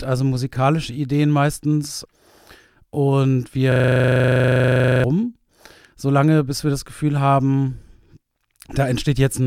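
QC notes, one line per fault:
3.72–5.04 s, system hang loop: a 40 ms slice repeats 33 times, giving a rattling 25 Hz buzz. The system froze. About one and a half seconds of audio vanished.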